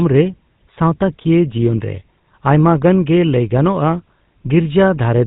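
From start to finish the speech has been carried through the GSM full-rate codec, which fits a 13 kbps channel. The codec models the vocal tract as a filter and excites it with a sparse, regularly spaced pulse train that keeps only one excitation sample in three, and it discards everything above 4 kHz. The result is a plainly audible buzzy, gravelly roughness on the speech, with a dull, band-limited top end throughout.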